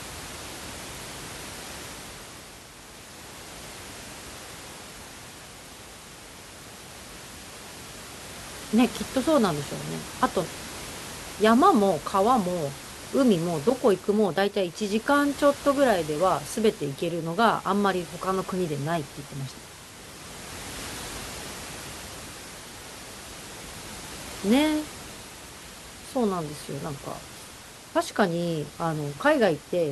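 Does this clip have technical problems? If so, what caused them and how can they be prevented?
No, this speech clip has no technical faults, so there is nothing to prevent. The background noise of the room the microphone was in can be heard about 16 dB below the speech, and it is part of the recording itself.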